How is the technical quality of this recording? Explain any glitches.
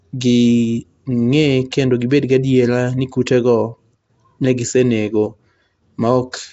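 The recording carries plainly audible codec damage from start to finish, plus one brief pre-echo.

Throughout, the speech has a rough, hissy halo and a smeared, underwater colour, with nothing above 7.7 kHz. The likely cause is Nellymoser compression, consistent with a 32 kbps stream, where weak bands receive no bits and are replaced with noise.

At 1.71 s there is pre-echo: about 16 ms of hiss arrives just before a sharp attack, which sounds softened. The codec spreads quantisation noise across its whole block, so noise sized for the loud onset also fills the quiet moment preceding it.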